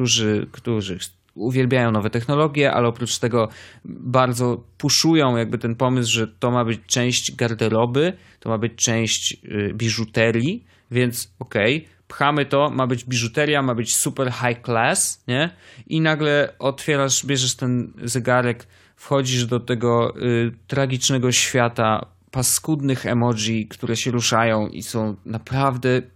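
Nothing in this recording gives a listener any technical fault to point to; the speech simply runs its course without a glitch worth noting.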